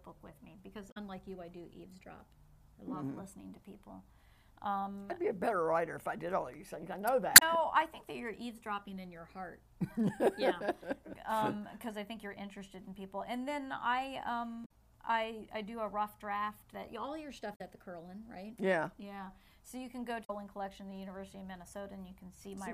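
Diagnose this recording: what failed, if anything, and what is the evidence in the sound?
The codec stage failed: damaged data in a compressed stream. Five brief spans of the encoded file carry bad bytes, so the decoder cannot parse those frames, loses its place, and hunts forward for the next valid frame header before resuming. Each event is a short disruption, a chirp, squawk, click or short hole about 0.1 s long, heard at 0.88–0.97 s, 7.33–7.43 s, 14.62–14.71 s, 17.52–17.61 s and 20.21–20.30 s.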